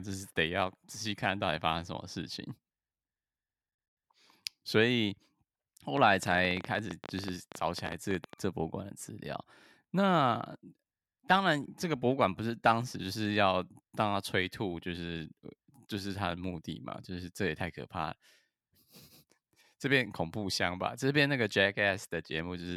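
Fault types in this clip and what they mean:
Train of clicks: from 5.97 to 8.34 s the speech is overlaid by a burst of roughly thirty short, near-identical pulses at about 12.7 per second, spaced unevenly, peaking about 10 dB above the speech and audible in the gaps as well. The likely source is outside interference or a faulty connection or power supply rather than anything in the recording itself. Unlike a single click or crackle, the pulses repeat with the same shape for over two seconds.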